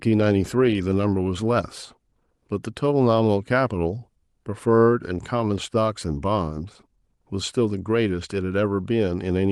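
No technical faults occur at any point in the speech.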